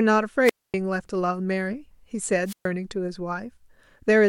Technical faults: wireless microphone squelch dropout

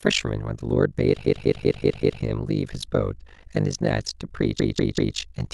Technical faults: overlap-add ripple; repeated frames

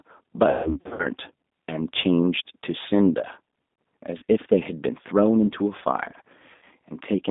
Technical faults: G.729 codec; VoIP packet loss concealed by the speech codec

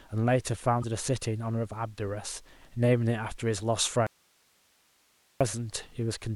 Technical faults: damaged data in a compressed stream; audio dropout to a faint residue

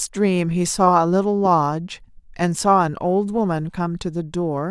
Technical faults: none

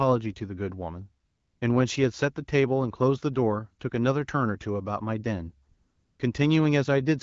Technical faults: AMR comfort noise

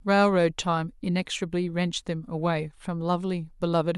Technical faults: none

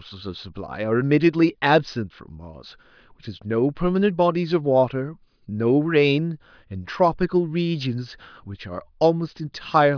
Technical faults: none

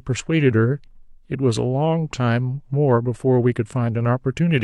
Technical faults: none

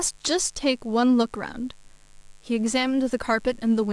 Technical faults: mains buzz

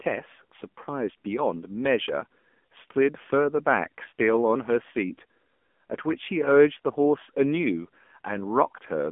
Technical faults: AMR narrowband mobile codec

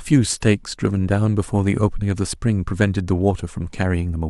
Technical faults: none

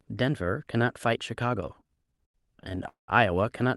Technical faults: repeated stalls (stutter)

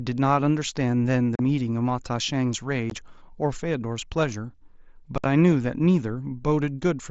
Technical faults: unconcealed Bluetooth headset packet loss

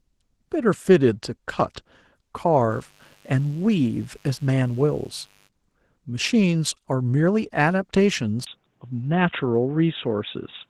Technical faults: Opus voice compression; mains buzz; input switched to a poorer device

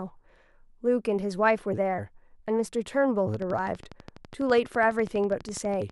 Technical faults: train of clicks

